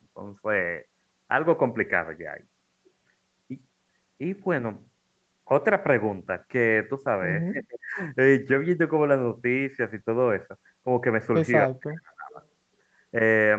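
Around 7.52 to 7.98 s the speech suddenly sinks, dropping by something like 30 dB at its deepest, then comes back. It happens again from 11.66 to 12.3 s, this time a deeper dip of about 35 dB. That pattern is most likely speech suppressed in double talk. Both ends were talking at once, the echo canceller couldn't tell the near talker apart from loudspeaker echo, and it pulled the whole signal down to be safe.

Right after that, from 12.3 to 12.46 s, there's a faint, short ghost of the voice trailing about 279 ms behind, roughly 30 dB under the speech. That's likely an echo leak: the far end's canceller didn't fully scrub what its microphone caught from its loudspeaker, so a delayed scrap got sent back. The leaked copy sits inside the call's band, with nothing above 8 kHz, just like the rest of the signal.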